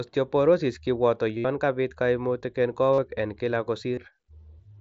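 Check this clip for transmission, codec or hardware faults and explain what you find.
Three short dropouts in the speech come from concealed Bluetooth headset packet loss, at 1.38 to 1.45 s, 2.93 to 2.98 s and 3.95 to 3.97 s. Each is a brief buzzy, held tone ending in a slight warble, because the receiver repeats recent waveform to cover lost headset packets.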